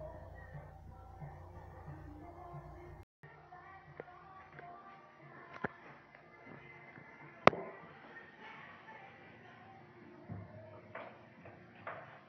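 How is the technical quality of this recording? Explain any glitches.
The recording has one fault that lasts to the end. At 3.03 s, after a 200 ms silence, the sound turns dull and boxy, with nothing above 6 kHz. It drops about 5 dB and gains a new noise floor roughly 30 dB down. A plain filter would only remove highs, but here the gap, tone, level and noise all change at once. That likely means the input switched to a poorer device.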